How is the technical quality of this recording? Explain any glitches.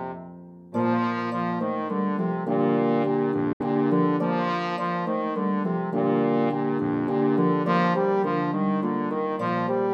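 One glitch affects the recording: a brief hole in the audio at 3.53 s, ending at 3.61 s. It sounds like a Bluetooth dropout. The sound cuts out for roughly 70 ms and then returns. It resumes as if it had kept playing through the gap, so the missing material is skipped rather than delayed. The likely cause is wireless packets arriving too late and being discarded, and a gap this long fits a few consecutive frames lost together.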